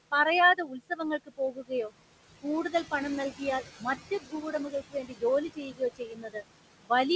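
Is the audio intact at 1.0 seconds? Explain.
No. At 1.0 s the speech sounds swallowed and faint, right at the end of a dip that runs from 0.55 to 1.01 s. This is speech cut by the noise suppressor: it mistook parts of the speech for steady background and turned them down along with the room noise. The deepest drop is about 17 dB, and altogether about a third of a second within that span loses level, so soft sounds and endings fade out.

The noise suppressor artifacts are also present at that moment, as they are throughout. The room noise, which sits about 12 dB below the speech, sinks between phrases and rises under them. This happens because the suppressor lowers whatever bands it judges to be steady noise, frame by frame, by about 18 dB. As its decisions shift from frame to frame, the speech can take on a thin, watery edge.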